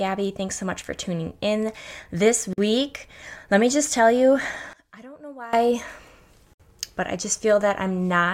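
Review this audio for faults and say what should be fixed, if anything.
Separately encoded pieces were joined without trimming the encoder's start-up delay and last-frame padding, so each join leaves a gap at a join of encoded pieces. The continuous speech stops abruptly for 47 ms at 2.53 to 2.58 s and again for about 61 ms at 6.54 to 6.60 s, with smeared edges, then resumes where it left off. To prevent this, trim each piece's encoder delay and padding before joining, or encode the material as one continuous stream.

From 4.73 to 5.53 s the sound drops by about 20 dB to a faint copy. The likely cause is one channel inverted in polarity at a point where the stereo is folded to mono. The centred content shared by both channels cancels, leaving only the small difference between them. To prevent this, check and correct channel polarity before any mono downmix.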